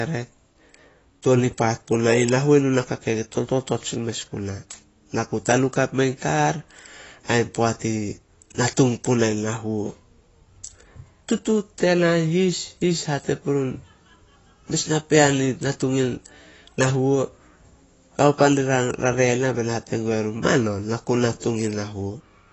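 Speech runs the full clip with plainly audible AAC compression damage. Nothing is heard above 8 kHz, so it sounds dull. Sibilants fizz and sustained sounds warble and smear. This is likely AAC-LC coding at a low bitrate, which fits about 24 kbps.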